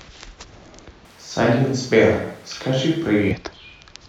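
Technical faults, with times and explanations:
1.05–3.31 s: switch to a distant microphone. The speech suddenly turns roomy, hollow and bass-light, about 5 dB quieter, with room noise about 30 dB below it, likely because the close microphone dropped out. The waveform steps down at the start and back up at the end, and the spectrogram thins at the bottom and shows smeared reverb tails.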